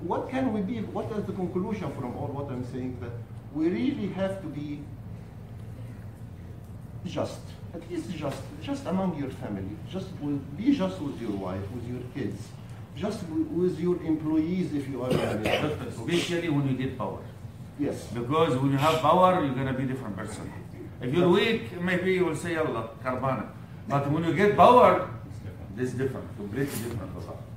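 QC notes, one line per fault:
13.16–27.57 s, sample clock jitter: the converter's clock begins to wander at random, on the order of a couple of microseconds, so each sample is captured slightly early or late. The resulting amplitude error depends on how steeply the waveform is changing, so it stays around 40 dB below the signal, adding a fine hiss and grainy roughness that swells on loud, bright passages and falls away entirely whenever the audio goes quiet.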